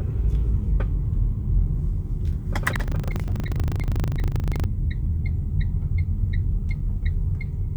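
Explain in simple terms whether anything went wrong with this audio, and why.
Buffer tearing from 2.68 to 4.66 s: playback slipped out of step with the hardware, so small slices of slightly older sound repeat, adding a rattling 25 Hz buzz.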